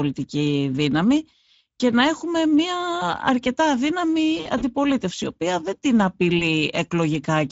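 Speex codec damage runs through the whole recording. The speech was coded at about 16.8 kbps, a middle setting. The voice sounds plainly noisy and hoarse. The top of the band is thin and hissy. That fits a noise-like fill standing in for real detail above 4 kHz.

From 4.37 to 4.64 s there is VoIP packet loss concealed by the speech codec. About 100 ms of audio went missing, scattered over roughly 240 ms, in runs up to 40 ms. The decoder filled each gap by repeating its last pitch and filter at falling gain. The speech turns stretched and smeared, then weak. It stays faint for a moment after the gaps.

At 6.39 s, just after "η οποία δεν την", a single 20 ms frame is lost. The concealment bridges it with a brief smear and a dip in level.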